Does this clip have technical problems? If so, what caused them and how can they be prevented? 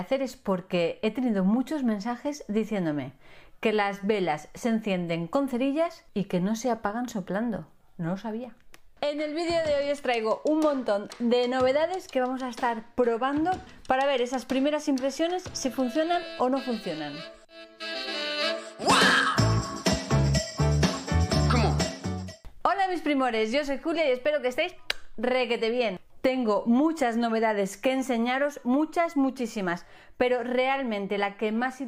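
No, there are no technical problems to report here.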